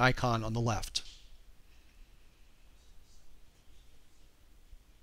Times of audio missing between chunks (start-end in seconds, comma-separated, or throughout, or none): 1.60, 3.55